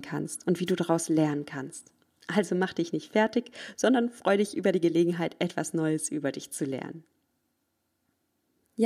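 A short burst of static swishes over the speech from 0.66 to 0.72 s, after "kannst und wie": a wireless microphone noise hit, where reflections briefly cancel the FM radio signal.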